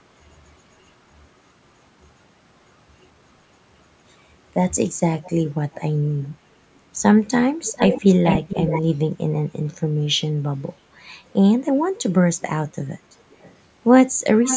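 The far end of this call of speech likely had its echo canceller fail to remove what its microphone picked up from its loudspeaker, so an echo leak returns a delayed copy of the speech. The copy trails by 496 ms at 5.22–5.32, 5.73–5.80 and 6.23–6.28 s, then by 431 ms at 7.68–8.82, 12.40–12.46, 13.30–13.54 and 14.44 s to the end. Most of these are faint scraps well below the speech. The 7.68–8.82 s stretch is almost as loud as the speech itself, and the final one is fairly strong. The call's microphone processing also leaves nothing above 8 kHz.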